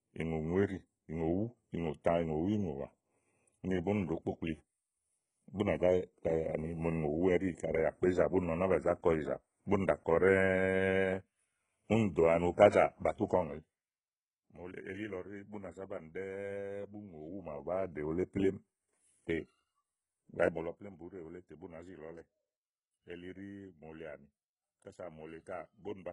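HE-AAC compression affects the speech from start to finish, with heavy codec damage and nothing above 10.8 kHz. The treble is likely rebuilt by spectral band replication, lower bands copied upward under a coarse envelope at a bitrate that fits about 12 kbps, so harmonics misalign and s sounds turn gritty or lispy.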